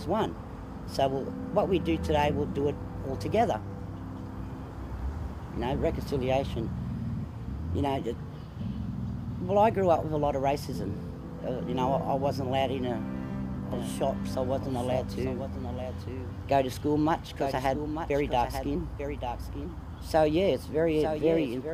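From 13.72 s to the end, a second copy of the sound runs about a second behind the original, around 10 dB quieter, so everything is heard again as a faint, clean repeat with no reverberant tail. It cuts in abruptly rather than fading up. This is a doubled audio track, likely caused by the same signal reaching the mix twice, once directly and once through a slower path or a misaligned edit.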